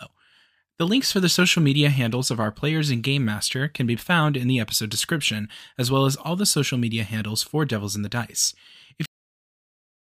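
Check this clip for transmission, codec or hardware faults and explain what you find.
The speech has a cut-off end at 9.06 s. It stops mid-sound and drops straight to digital silence for the last second, because the final buffers were never written or played. Unlike a fade-out or a natural ending, there is no decay or room tail at all.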